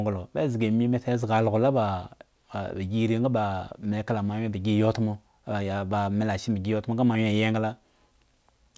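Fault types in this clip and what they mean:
aliasing: throughout, high speech energy folds back below 8 kHz, consistent with unfiltered downsampling to 16 kHz, leaving faint, gritty, metallic sibilants well beneath the speech.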